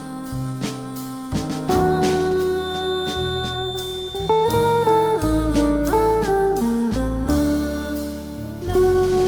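A loudspeaker-to-microphone loop likely sat right at the edge of feedback, producing a feedback whistle from 2.52 to 5.25 s: a thin, steady tone at 3.6 kHz, roughly 15 dB below the audio, swelling and fading slowly in level without building up.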